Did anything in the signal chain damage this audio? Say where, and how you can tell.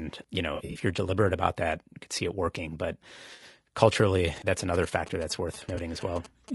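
Yes, at three stages of the chain.

Low-delay AAC compression runs through the whole clip. The speech sounds rough and grainy, with noise filling the gaps between pitch harmonics and a top band that sounds synthetic rather than natural. That pattern likely comes from AAC-ELD, the low-delay codec used for calls, at a bitrate of around 32 kbps. Its short frames cannot resolve the harmonics cleanly at that rate, so the damage is plainly audible.

AAC frame loss with concealment appears in three places, which points to packet loss on the network. The first is from 0.55 to 0.79 s, just before "you're deliberate about that". About 120 ms of audio is missing there, scattered over 200 ms in short runs of a few tens of milliseconds. The second is from 3.33 to 3.43 s, about 60 ms. The third is from 5.75 to 5.78 s, about 20 ms. Each gap sounds like a smeared, noisy patch, because the decoder rebuilds the missing frames from the last good spectrum.

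GSM signalling bursts sit from 4.28 to 6.5 s, about 15 dB below the speech. They form a galloping dit-dit-dit pattern of short buzzes at 217 Hz. This comes from the analogue wiring. A nearby 2G phone was exchanging signalling with its network, and the audio circuit rectified the radio bursts into the audio band. The 217 Hz buzz rate matches the GSM frame rhythm.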